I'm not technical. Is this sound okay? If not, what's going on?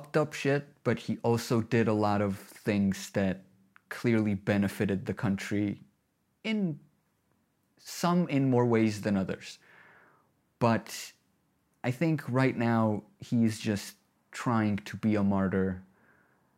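No. At 5.68 s the speech has a single sharp click, most likely from dropped samples: roughly one sample went missing, so the waveform jumps straight to a later value. The gap is far too short to lose any sound, but the jump makes a click.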